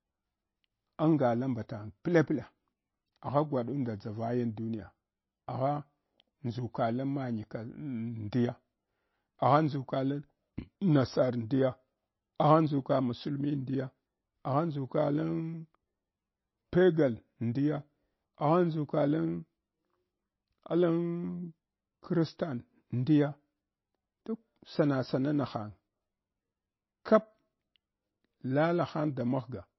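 Speech, likely squeezed through heavy MP3 compression that fits a bitrate around 22 kbps, loses everything above 5.8 kHz and sounds plainly watery and swirly throughout.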